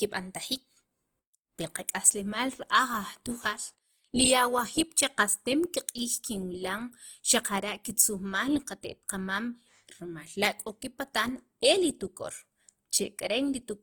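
From start to finish the speech carries plainly audible coding damage, likely from Opus compression. Bands short of bits are refilled with folded or noise-like content, so tonal parts turn grainy and rough rather than swirling. The full bandwidth survives, which fits the music mode at about 24 kbps. On a spectrogram, energy reaches about 20.2 kHz with nothing above. Clean harmonics give way to a speckled, noisy texture with few empty holes.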